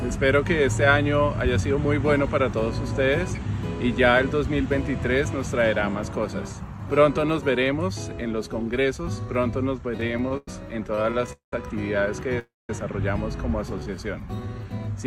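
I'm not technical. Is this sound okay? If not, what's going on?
No, there are a few hiccups, all near the end.

From 9.97 to 10.48 s and again from 10.87 to 11.53 s there are repeated stalls (stutter). The sound keeps catching and dragging in short bursts, the longest about 0.1 s and then 0.2 s, because the data kept arriving late. Nothing actually gets lost, it just drags.

At 12.39 s there's a call audio freeze. The sound hangs for about 0.3 s, trailing off into about 0.2 s of silence, then picks up where it left off. The likely cause is data held up on the network.

From 13.79 to 14.79 s there's a jitter buffer slow-down. The receiver stretched the audio to build up a reserve, so it plays at about 87% speed with no pitch change and runs about 0.14 s long, sounding a little drawn out.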